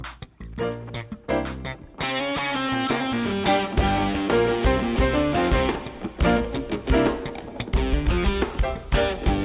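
No faults can be heard anywhere in the audio.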